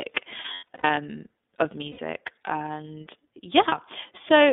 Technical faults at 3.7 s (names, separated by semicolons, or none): iLBC codec; lost iLBC frames